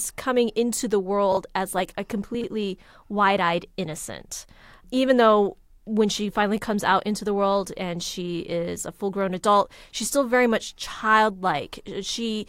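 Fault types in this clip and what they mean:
Chunks out of order: a short block of the speech turns up late and plays after the audio that should come after it, so nothing goes missing but the sequence gets shuffled, with abrupt joins. It happens around 1.32 to 1.37 s, where one block is displaced by a single slot, and again around 2.35 to 2.44 s, where it lands three slots late. Each block is about 23 ms.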